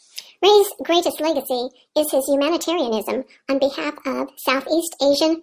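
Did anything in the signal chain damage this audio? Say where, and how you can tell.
Yes: a wrong sample rate at playback, throughout. Speech runs 1.45 times fast and 6.5 semitones high, which fits 22 kHz audio clocked at 32 kHz. On a spectrogram, harmonics sit higher and syllables are squeezed in time.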